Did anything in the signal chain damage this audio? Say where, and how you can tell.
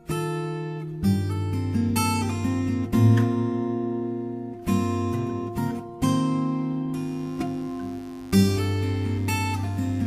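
Yes. From 6.96 s to the end, a steady, raspy mains buzz sits roughly 25 dB under the signal, entering in the analogue wiring. Its harmonics of 50 Hz reach into the kilohertz range, which separates it from smooth, low-only hum, pointing to switching spikes from a dimmer or rectifier, or a missing shield.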